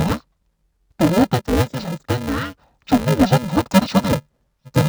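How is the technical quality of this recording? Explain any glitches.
The quality's poor: the speech is affected by one fault that runs through the whole clip. It's interleaved audio read as planar. The stream arrives in short blocks, and each block's alternating left and right samples get split into a first half and a second half instead. At about 2.67 ms per block, which fits 128-sample blocks at 48 kHz, the halves are too short to give a real octave drop. What you hear is dull, robotic speech with a steady 375 Hz buzz from the block rate.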